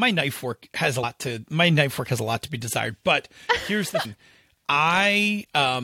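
Speech with compressed frames skipped at 1.02 s and 4.04 s: the audio jumps ahead roughly 100 ms and 150 ms, several frames of about 23 ms each, rather than leaving a silent gap.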